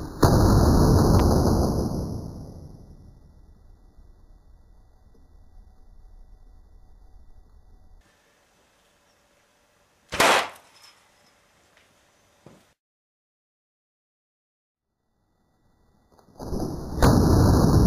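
The audio carries two loud pops, single sharp transients at 1.20 to 1.22 s and 17.04 to 17.07 s, peaking roughly 10 dB and 15 dB above the signal, which continues underneath. Each is likely a voltage spike from a plug, switch, static discharge or driver glitch.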